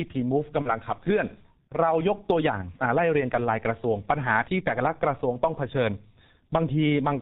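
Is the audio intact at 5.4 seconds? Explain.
No. At 5.4 seconds, as throughout the clip, heavy G.723.1 codec damage leaves the speech muffled and hoarse with smeared consonants, which fits a roughly 6 kbit/s stream coded in 30 ms frames. A spectrogram shows nothing above 4 kHz and blurred, blocky transitions.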